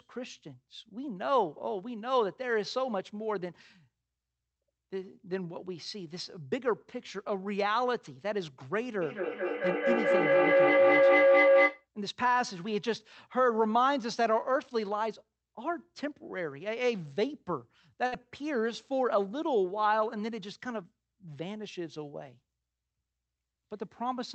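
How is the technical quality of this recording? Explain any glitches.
Two glitches stand out in this speech recording: a feedback howl and a short dropout. It came through a call codec whose top end stops around 8 kHz, which fits Opus on a WebRTC path.

From 9.01 to 11.87 s there's a feedback howl. A second device in the room was on the same call, and the mic-to-speaker loop gained level on every trip. The repeats grew instead of dying away and narrowed to a tone around 500 Hz, pulsing roughly every fifth of a second. At its peak it sits about 7 dB above the speech, and it stops once the loop is broken.

At 18.06 to 18.15 s there's a burst of packet loss. A run of packets never arrived in time, so the receiver stretched the last bit of sound for about 56 ms, fading it out as the gap went on. That gives a brief held buzz or hiss. When the audio resumes, about 60 ms of the speech is simply gone, so there's a small jump where that stretch should have been.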